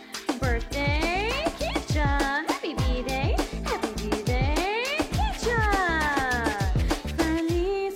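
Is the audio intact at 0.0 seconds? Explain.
Yes, the audio is intact at 0.0 seconds, with no fault at that moment.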